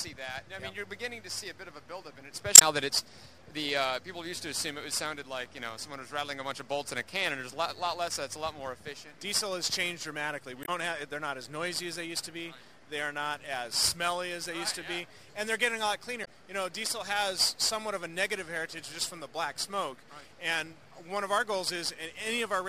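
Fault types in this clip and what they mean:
Damaged data in a compressed stream: Part of the encoded data is corrupt. The decoder misreads those frames and loses sync until it finds the next frame header. Short blips result, each about 70 ms long, at 2.55, 10.62 and 16.21 seconds.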